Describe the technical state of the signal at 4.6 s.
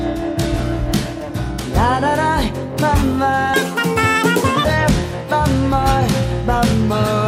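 At 4.6 s you're right at the tail of a section at the wrong speed, 3.54 to 4.65 s: it's running twice as fast, roughly ten semitones high, likely from playback against the wrong clock.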